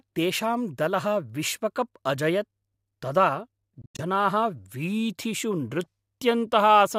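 From 3.82 to 4.01 s, the speech breaks up into brief holes. About 128 ms of sound is missing, the longest gap about 85 ms. Speech resumes as if it had kept playing. This is likely a Bluetooth dropout: packets arrived too late and were discarded.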